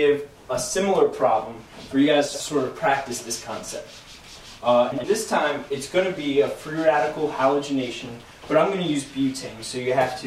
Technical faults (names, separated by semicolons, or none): chunks out of order